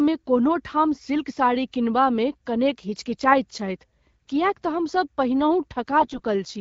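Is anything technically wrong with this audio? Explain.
Yes. There are AMR bit errors at 4.29 s and again from 6.00 to 6.20 s, with the second burst heavier. Flipped low-priority bits in the coded speech frames misplace the excitation pulses and skew the fine pitch, gain and spectral values, so the speech briefly turns hoarse, scratchy and gargly. The underlying AMR wideband coding sounds like the 12.65 kbit/s mode.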